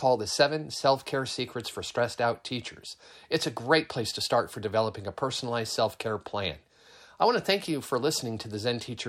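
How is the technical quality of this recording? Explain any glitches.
No glitches or technical faults can be heard here.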